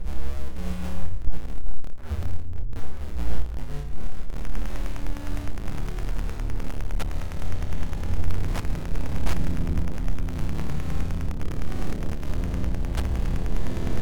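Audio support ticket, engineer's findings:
Wi-Fi interference, 4.36 s to end (14.0 s). Steady faint ticking about ten times a second, roughly 30 dB under the sound. Nearby Wi-Fi radio's 102.4 ms beacon and data bursts rectified by the audio circuit.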